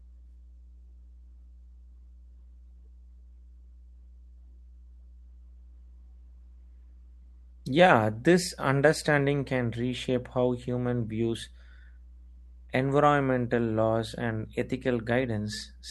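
A steady mains hum sits under the speech for the whole clip. It's a 60 Hz tone with a few low harmonics stacked on it, the kind you get when a ground loop or a nearby transformer bleeds the power line into the signal path. It's not subtle, roughly 20 dB down from the speech, so you hear it as a constant low drone filling every pause. It rides through the call codec, and the top end above about 12 kHz is gone.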